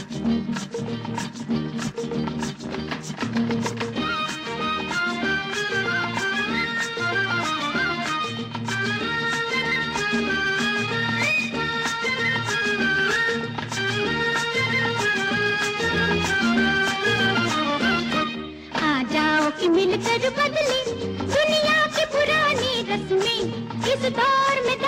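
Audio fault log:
No audible faults detected.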